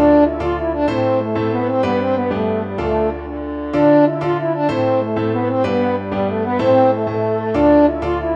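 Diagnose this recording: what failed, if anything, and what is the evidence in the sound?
Nothing failed here: the audio runs along without a glitch, dropout or distortion anywhere in it, so there's simply no fault to trace back to any stage of the chain.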